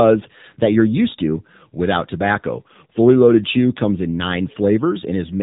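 Speech squeezed through an AMR narrowband mobile codec, and you can hear it the whole way through. Everything stops at about 3.8 kHz, so there's no air or sibilance on top. The codec rebuilds the voice from a vocal-tract model fed by a handful of pulses per short subframe, so the damage is plainly audible as a synthetic, phone-line quality. The amount of artefact fits the AMR-NB 7.4 kbps mode.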